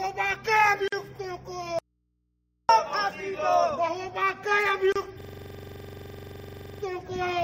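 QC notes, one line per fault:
0.88 s and 4.92 s, gap at a join of encoded pieces: silences of 45 ms and 32 ms with smeared edges, then the sound resumes where it stopped, unlike a dropout, which leaves hum.
1.79 to 2.69 s, audio dropout to a faint residue: the sound cuts abruptly for 0.9 s, leaving mains hum at about 50 dB below the signal, likely a lost input on a still-live path.
5.21 to 6.83 s, system hang loop: one 42.7 ms piece repeats 38 times at a 23.4 Hz rate, which fits a cycling 2048-sample buffer. The sound repeats instead of falling silent.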